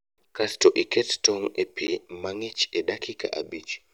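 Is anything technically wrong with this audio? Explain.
Yes. A block of digital silence at 1.87 s, between "iket tong' e" and "mang'ich e": about 10 ms of samples dropped abruptly to silence, heard as a tick or dip in the speech.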